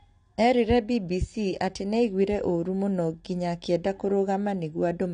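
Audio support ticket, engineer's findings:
Dull speech throughout, nothing above 9.8 kHz, with plainly audible coding damage. Likely AAC compression, AAC-LC at a low bitrate that fits 32 kbps: coarse quantisation plus a lowered cut-off. Unlike a plain low-pass filter, it also adds codec smearing.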